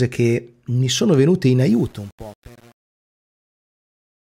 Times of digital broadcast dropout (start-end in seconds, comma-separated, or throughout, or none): none